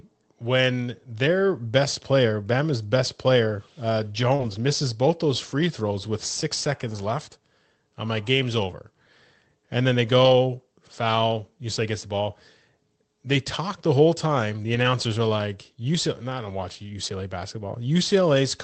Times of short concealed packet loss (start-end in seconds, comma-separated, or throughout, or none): 4.35-4.41